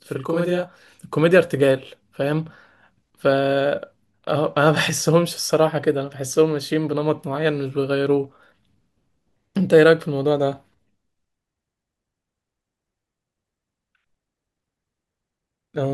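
Right from the start, through to about 1.0 s, there's channel delay (doubling): one channel runs about 40 ms behind the other, and once they're folded to mono you hear the speech twice at equal level, a quick slap-like doubling.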